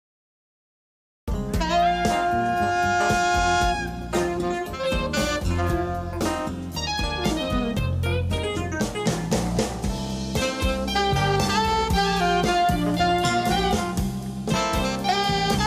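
The audio opens with a cut-off start: from 0.0 to 1.28 s there is only digital silence, and at 1.28 s the sound appears abruptly, already in progress rather than building from a natural attack or fade-in. The capture or stream evidently began late, so whatever was sounding before that point was lost and the first audible material is joined straight onto silence with a hard edge.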